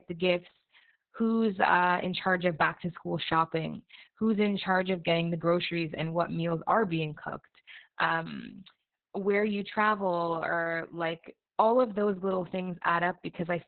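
Speech throughout all of the clip carries heavy Opus voice compression damage. The SILK coder has narrowed the band to about 4 kHz, leaving the voice muffled, hoarse and faintly robotic from coarse excitation coding, a sound that points to a bitrate near 6 kbps.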